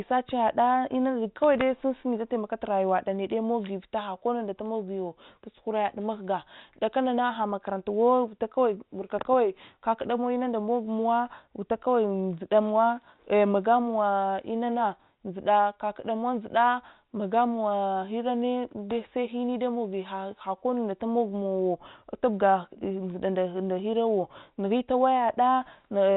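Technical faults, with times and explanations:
Nothing here counts as a technical fault: the speech simply carries the narrow band of ordinary G.711 telephone coding, with nothing heard above 4 kHz.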